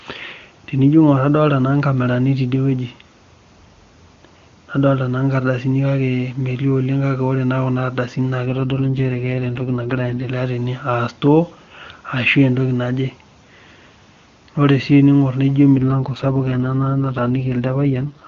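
AMR rate drop at 8.46–10.30 s and again from 15.76 s to the end of this speech clip: the codec falls from full HD Voice quality to a rough, raspy, synthetic sound, which fits a switch from 23.85 to 6.6 kbit/s to protect a weak link.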